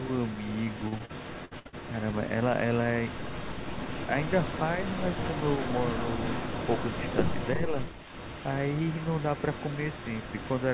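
From 0.0 s to 7.57 s there is an echo leak. A delayed copy of the speech follows the main talker by about 335 ms, roughly 10 dB quieter. This is likely a loudspeaker on the far side whose echo canceller left some of its microphone pickup in the signal. On a spectrogram, each syllable's harmonic pattern shows a fainter duplicate shifted a third of a second to the right. The waveform shows smeared tails after each burst instead of clean gaps.

Within that stretch, from 0.64 s to 1.75 s, repeated packet loss gives a choppy, robotic sound. Seven short holes appear in quick succession, the longest about 60 ms, adding up to roughly 300 ms missing. Of that, 286 ms was filled by stretching the preceding sound, so about a quarter of the span is concealed. A spectrogram shows frozen, flat-lined harmonic bands and abrupt edges. The waveform shows repeated, near-identical cycles where the original would vary.

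From 7.55 s to 7.77 s the speech is suppressed in double talk. For about 200 ms the level dips by around 10 dB. The likely cause is that the echo canceller could not tell the local talker from the returning echo and turned both down. This shows as a brief notch in the waveform envelope and a faded, thinner patch on the spectrogram.

From 7.77 s to the end, the echo leak returns. It now trails by about 351 ms and is roughly 15 dB down, likely from the same residual loudspeaker pickup. The duplicate traces are fainter but still visible, all within the band that stops at 4 kHz, as expected for a 64 kbps G.711 call path.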